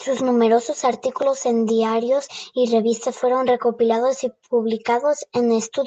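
Nothing stood out on listening to this speech clip, which comes through a normal call path.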